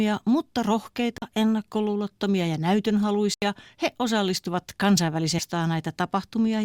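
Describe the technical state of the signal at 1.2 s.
At 1.2 s the speech drops out in a brief hole, about 40 ms long, from 1.18 to 1.22 s. This is a block of digital silence: a run of samples has been replaced by zeros, and the signal jumps to zero and back with no fade. A gap like this arises when the output buffer isn't filled in time.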